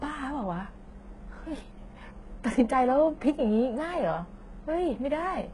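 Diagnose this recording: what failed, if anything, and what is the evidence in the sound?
HE-AAC compression throughout, likely the codec stage: nothing above 11.3 kHz, gritty sibilants from treble copied up from lower bands, fitting a 12 kbps stream.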